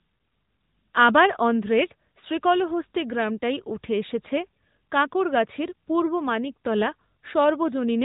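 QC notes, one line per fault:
Throughout, AMR narrowband mobile codec: the speech sounds boxed-in and plainly buzzy, with nothing above 4 kHz. The 8 kHz sampling removes the upper band, and modelling the voice with 2 to 10 pulses in each 5 ms adds a synthetic edge, which fits the 10.2 kbps mode.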